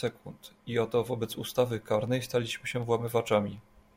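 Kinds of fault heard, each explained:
Periodic USB or driver dropouts: A steady train of small ticks runs through the speech every 0.25 s, from about 0.08 s to 3.83 s, some fifteen in all, and they can only be heard while there is signal underneath. Each tick is a tiny gap, a small fraction of a millisecond, where the audio was replaced by silence because the USB bus or audio driver was blocked at a fixed interval.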